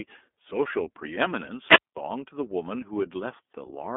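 From start to finish, the speech runs through the iLBC codec. Nothing sits below about 250 Hz or above 3.5 kHz. Each frame is coded on its own, and the rough, slightly synthetic texture fits 30 ms frames at 13.33 kbps. The damage is plainly audible.

At 1.65 s comes a wireless microphone squelch dropout. The radio signal fades, hiss rises, and the receiver's squelch mutes the output. A gap of near silence lasting about 210 ms follows. The speech returns at 1.97 s.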